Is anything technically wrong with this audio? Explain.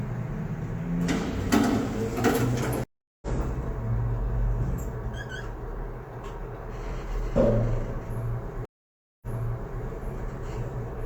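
Yes, there are two stream reconnects. At 2.84 s the audio drops to silence for 382 ms, then resumes roughly a third of a second further on, so that stretch of sound is skipped. At 8.65 s a 568 ms silence ends with playback jumping back 604 ms and repeating material, with recovery complete by 9.82 s. Each time the connection broke and a fresh decoder restarted mid-stream. On a waveform this shows as a flat gap followed by a fade-in; a spectrogram shows a blank column and a content discontinuity, duplicated after the second gap.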